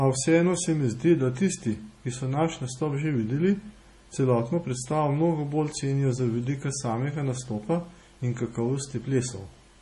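Throughout the recording the speech carries heavy damage of the kind left by MP3 compression, likely from a low-bitrate encode; the degree of loss fits something around 32 kbps. Nothing remains above 11.3 kHz, where the encoder cut the treble outright to save bits. Below that, weak frequency lines drop in and out between frames, giving a watery, swirling texture, metallic chirping on s sounds, and softened, smeared consonant onsets.

At 3.01 s, between "ki so naš nastop" and "že videli", a bit error spike occurs. A single sample jumped sharply away from the waveform and came straight back, as happens when one bit flips in storage or on a digital link. It is heard as one brief, hard tick, broadband and unrelated to the speech around it, with no ringing or decay afterwards.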